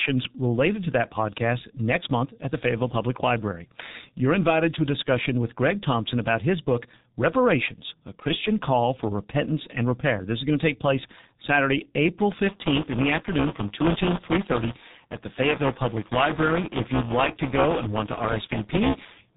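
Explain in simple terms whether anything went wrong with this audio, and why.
Yes, two things went wrong. The speech passed through the G.723.1 codec, an old, heavily compressing phone codec that drops everything above 3.8 kHz, so voices sound muffled and hoarse, with smeared consonants.

From 12.42 s to the end, buffer tearing sets in: playback and writing fall out of step, so roughly a tenth of each buffer repeats audio from about 10 ms earlier, causing a robotic 200 Hz buzz.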